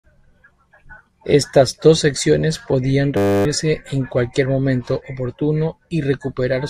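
At 3.17–3.45 s, after "dos secciones podían", a system hang loop replays one frozen 10 ms buffer, heard as a steady 100 Hz buzz.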